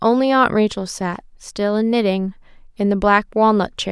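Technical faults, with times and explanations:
Nothing in this speech recording stands out as a technical fault; it all sounds as it should from the first moment to the last.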